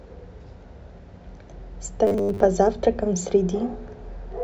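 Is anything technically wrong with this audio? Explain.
Yes. From 2.07 to 2.40 s the speech turns into robotic sound from repeated short buffers. The likely cause is new audio arriving too seldom, so playback keeps looping the last short block while the real material is dropped, with roughly 70% of that stretch filled by repeats. The loop rate imposes a fixed 100 Hz buzz, which fits a 10 ms block, giving a rigid, metallic drone that only loosely tracks the speech.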